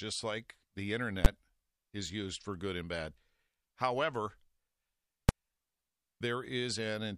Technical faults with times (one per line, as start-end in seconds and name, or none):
1.25 invalid numbers at full scale
5.29 invalid numbers at full scale